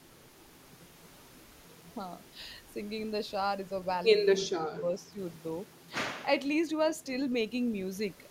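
From 4.47 to 5.17 s the speech sinks in pieces, about 25 dB down at its deepest, for roughly 0.4 s in all. This is speech suppressed in double talk. An echo canceller likely mistook overlapping talk for echo and turned the speech down.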